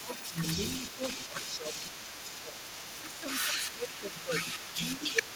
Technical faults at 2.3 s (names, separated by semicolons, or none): other side's voice leaking through; speech suppressed in double talk